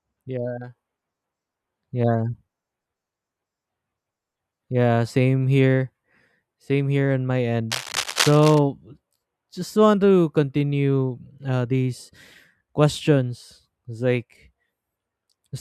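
From 7.71 to 8.59 s, after "here on my", cable scratch noise rustles nearly speech-loud, likely a worn connector; dense and uneven, unlike isolated clicks.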